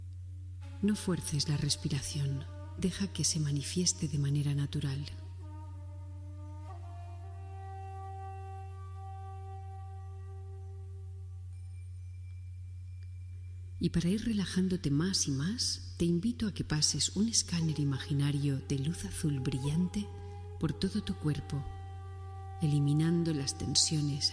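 Nothing stood out as a technical problem on listening to the audio.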